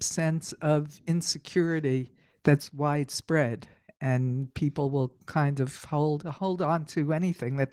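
Speech throughout carries plainly audible Opus voice compression: the low-rate linear-prediction layer leaves it hoarse and slightly robotic, which fits a hybrid-mode encode around 16 kbps.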